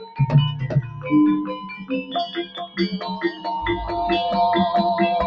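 Throughout, a noise suppressor applied to music or sounds treats held, steady material as noise, so the level pumps by around 10 dB. On a waveform, the sustained passages show an uneven, breathing envelope. From 0.0 to 0.21 s, and again from 1.6 to 2.79 s, the sound is cut by the noise suppressor, with dips of about 12 dB and about 11 dB. The spectrogram shows these stretches fading and thinning while sharp onsets survive, all within a band that stops at 8 kHz from the call processing.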